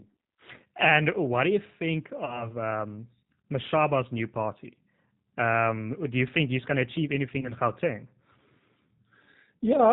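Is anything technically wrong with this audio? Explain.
Yes. Throughout, the speech carries G.729 codec damage. Its band-limited, rough, slightly synthetic texture fits an 8 kbit/s model-based coder that rebuilds speech from pitch and filter parameters.

At 2.25–2.50 s and 7.40–7.52 s there is VoIP packet loss concealed by the speech codec. About 30 ms of audio was lost and extrapolated from earlier frames, giving a buzzy or noisy, fading smear before recovery.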